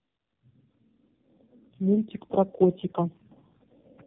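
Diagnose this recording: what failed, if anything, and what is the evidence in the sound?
The speech sounds rough, muffled and warbly for its whole length, with nothing above 3.8 kHz. This is tandem speech coding at the codec stage: three low-rate speech coders in a row, the last fitting AMR-NB, each re-encoding the previous coder's degraded output.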